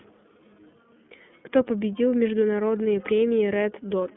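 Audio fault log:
throughout iLBC codec: spectrogram is empty above 3.6 kHz, and each 30 ms frame is coded independently, so the speech sounds rough and synthetic, which fits the 13.33 kbps mode.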